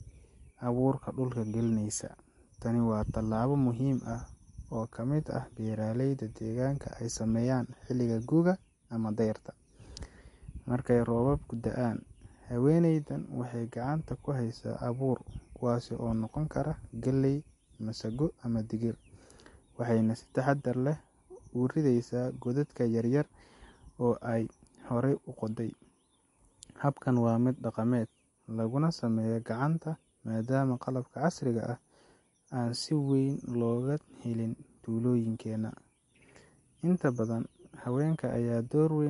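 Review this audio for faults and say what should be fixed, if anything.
Throughout the speech, nothing sounds above about 11.3 kHz, and sibilants swirl and chirp metallically; this is likely MP3 compression at a low bitrate, around 48 kbps, cutting treble and dropping weak lines frame to frame. A spectrogram shows a hard ceiling and flickering holes. Encode at a higher bitrate or keep a lossless source.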